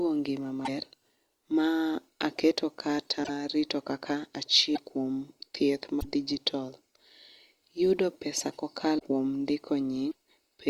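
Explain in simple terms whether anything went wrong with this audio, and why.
Something did go wrong. The speech skips forward six times, at 0.64, 3.23, 4.74, 6.00, 8.98 and 10.10 seconds. Each time there is a brief chirp, burst of noise or gap lasting 30 to 70 milliseconds. The likely cause is a broken MP3 bit reservoir. MP3 stores sound in frames of about 26 milliseconds, and each frame can borrow space from earlier ones. When frames go missing, the next frame reads the wrong data and sputters briefly.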